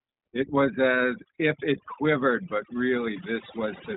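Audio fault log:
Throughout, overdone noise removal: the background drops and breaks up into twinkly specks, and quiet parts of the speech got stripped too.
Throughout, iLBC codec: nothing above 3.8 kHz survives, and each 20 ms frame coded on its own leaves the speech a bit rough and synthetic, about 15.2 kbps.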